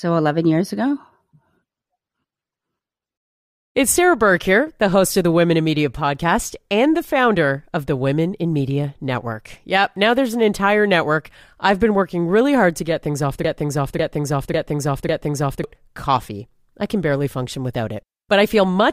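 Right after "get things off the", at 13.44 s, a broken-record loop kicks in: a 0.55 s chunk plays four times back to back until 15.64 s, where "coffee I can barely" picks up. Likely a stalled player or stream resending its last fragment, so whatever belonged there is gone.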